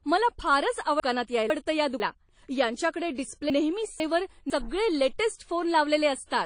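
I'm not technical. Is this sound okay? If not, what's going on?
No. Throughout, the speech sounds dull and swirly, with nothing above about 9.8 kHz. That is likely transcoding between lossy codecs: the recording was squeezed by one compressed format, then squeezed again by another, so both sets of smearing pile up.

There are also two spots with chunks out of order. Just after "मला फारच", between 1.0 and 2.0 s, and again between 3.5 and 4.5 s, a half-second piece plays one slot late, so the speech briefly jumbles.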